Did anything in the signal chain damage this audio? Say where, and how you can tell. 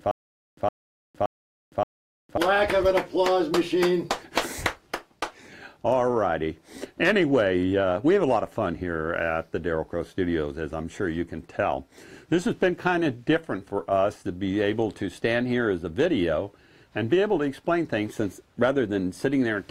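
Yes, at playback: a stutter with silent gaps, likely a stalled buffer, repeats one 111 ms burst every 573 ms from the start until 2.37 s, losing the audio between.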